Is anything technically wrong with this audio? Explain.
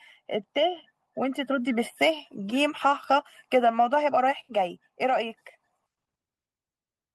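No, nothing technically wrong turns up anywhere in this speech recording.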